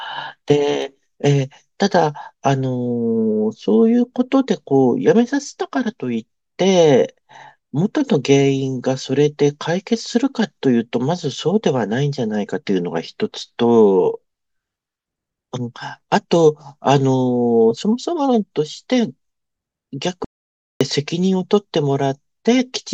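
At 20.25 s the speech cuts abruptly to total silence and resumes mid-flow at 20.81 s. This audio dropout to silence lasts 0.56 s, with no room tone underneath. The input was likely lost while silence kept being written, so that speech is missing.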